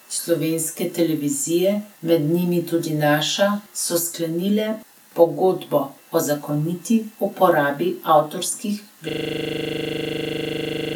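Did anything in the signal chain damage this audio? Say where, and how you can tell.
Yes, a system hang loop at the driver or buffer stage. After "zakoniti uporabi avtorskih", from 9.09 s to the end, the driver froze and the hardware replayed one 40 ms chunk of the ring buffer. This produces a 25 Hz buzz that shows as identical repeating waveform blocks and evenly spaced vertical spectrogram stripes.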